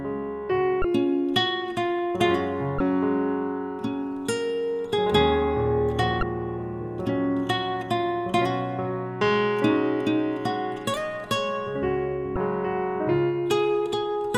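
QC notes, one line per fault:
0.81–0.85 s, 2.77–2.80 s, 6.19–6.23 s, 12.33–12.36 s: damaged data in a compressed stream. Corrupted bytes in the encoded stream make the decoder misread those frames, lose sync and hunt for the next valid frame header, so each spot comes out as a brief chirp or blip lasting about 30 ms.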